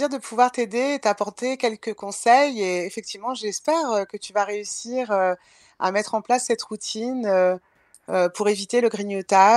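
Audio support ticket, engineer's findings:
Listened to the speech all the way along and nothing turned up worth logging, so no findings on this one.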